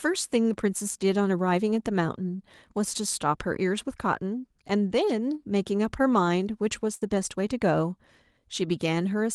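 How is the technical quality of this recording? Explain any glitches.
The recording has one clear glitch, a burst of packet loss. Its spectrum also stops sharply at 12 kHz, which fits a call codec such as Opus.

At 6.95 to 7.03 s, a burst of packet loss hits the speech. Several consecutive packets arrived too late or not at all, and the receiver stretched the last sound for about 57 ms, fading it, then skipped ahead about 60 ms. You hear the last sound briefly held and fading, then a jump. On a spectrogram the last sound's pattern holds steady before an abrupt edge, and the waveform shows a shrinking repeated pattern.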